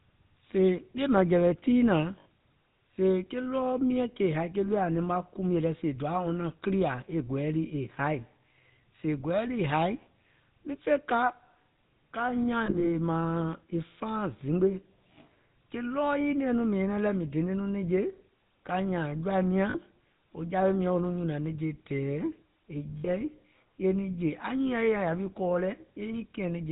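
Speech runs throughout with a buzzy, gravelly roughness and nothing above 4 kHz, which points to the GSM full-rate codec at 13 kbps. Its vocal-tract model, driven by coarse, regularly spaced pulses, can't reproduce the voice cleanly, and the damage is plainly audible. Brief rough, metallic rings appear at 2.2 to 2.26 s, 12.66 to 12.89 s, 19.7 to 19.77 s and 22.98 to 23.09 s. These are lost GSM frames, where the decoder repeats the last good frame's settings at a falling level. The losses last 40 to 100 ms, and the 12.66 s event is a scatter of short gaps, the longest about 40 ms.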